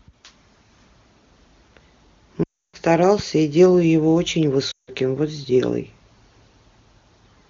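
At 2.44 to 2.76 s and again at 4.71 to 4.90 s, lost AMR speech frames cause the decoder to repeat the last good pitch and vocal-tract settings with falling gain. The speech drops to near silence within two frames. This shows as a tapering waveform and blurred, flattened harmonics before a quiet gap on the spectrogram.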